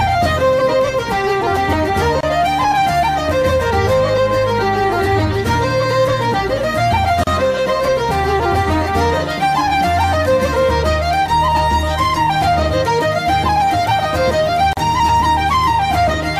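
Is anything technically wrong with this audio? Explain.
Yes. There are three gaps at joins of encoded pieces, at 2.21 to 2.23 s, 7.24 to 7.27 s and 14.73 to 14.77 s, lasting about 26, 34 and 39 ms. The audio was encoded in separate sections and spliced without trimming, so each encoder's start-up delay and last-frame padding survive as short silences. Each one sounds like a brief dropout with smeared edges, and the sound then resumes exactly where it left off.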